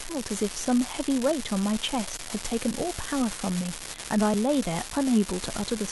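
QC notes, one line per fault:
Throughout: unreliable data bit. One bit line is marginal and flips in a random share of samples, so each error adds a spike of exactly the same height. The result is a steady crackle or fizz that keeps going through the pauses between phrases, not just under loud passages. The uniform spike size and the way it persists in silence set it apart from broadband hiss, which is smooth, and from clipping crackle, which follows loud peaks.
4.34 s: compressed frames skipped. About one frame of the encoded stream, with frames 32 ms long, was not played, either because it was missing or because the decoder rejected it as damaged. Roughly 30 ms of sound is lost and the audio jumps ahead without any silent gap.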